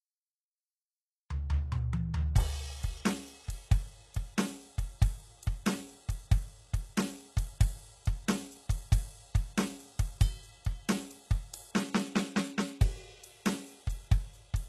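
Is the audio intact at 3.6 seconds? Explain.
No. Throughout the music, 3.6 s included, the treble sounds gritty and metallic and stops above 12.3 kHz, likely HE-AAC compression at a bitrate near 16 kbps, rebuilding upper bands from copied lower ones.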